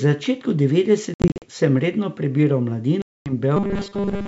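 Speech over a G.722 wideband telephone link shows packet loss on an ADPCM call twice, once at 1.14 to 1.45 s, where 180 ms vanishes in gaps up to 60 ms long, and again at 3.02 to 3.33 s, where 240 ms drops out. The decoder's predictor loses step, so the sound restarts slightly distorted. From 3.57 to 4.28 s, audio likely arrives too seldom and a 5 ms buffer is replayed for most of that stretch, giving robotic sound from repeated short buffers as a rigid 200 Hz metallic buzz.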